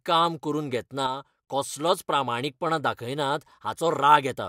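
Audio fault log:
1.07 to 1.48 s, one channel drops out: the speech falls abruptly by about 6 dB for 0.41 s, then returns. The likely cause is one stereo channel going silent, so the mono sum loses half its shared signal and anything present only in that channel.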